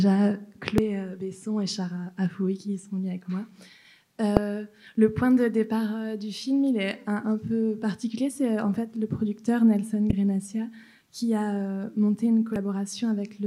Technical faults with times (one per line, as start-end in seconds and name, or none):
0.78 damaged data in a compressed stream
4.37 damaged data in a compressed stream
10.09-10.13 damaged data in a compressed stream
12.56 damaged data in a compressed stream